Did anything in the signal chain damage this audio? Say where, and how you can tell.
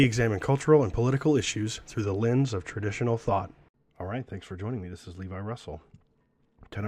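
Yes. From 2.04 s to the end, just after "and political issues through", the speech turns dull and muffled: de-emphasis applied wrongly, at a filtering stage such as playback or processing. A treble-cut curve meant to undo pre-emphasis hit audio that had none, or was applied twice, tilting the response smoothly downward to about 13 dB below 1 kHz at 10 kHz. A spectrogram shows the upper band fading from 2.04 s onward, and the waveform loses its sharp fine detail.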